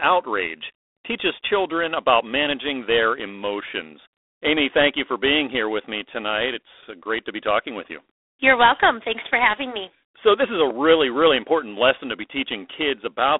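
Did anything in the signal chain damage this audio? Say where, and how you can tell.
Yes. Throughout, the speech carries a harsh, rasping hiss that rises and falls with its level, and nothing above about 3.9 kHz survives. That is G.726 ADPCM damage at the codec stage: too few bits per predicted-difference sample, which fits 24 kbit/s, over a telephone band.

A single loud pop from 10.70 to 10.73 s jumps roughly 10 dB above the speech, which continues underneath. This is a sudden voltage pulse added to the signal, likely from a plug, switch or static discharge in the analogue wiring.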